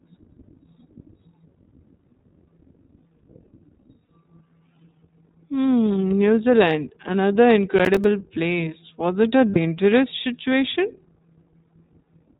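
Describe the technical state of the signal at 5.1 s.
At 5.1 s the speech carries iLBC codec damage, present across the whole clip. The band stops at 4 kHz, and each frame's excitation is coded independently, giving a plainly audible rough, synthetic texture consistent with the 15.2 kbps mode using 20 ms frames.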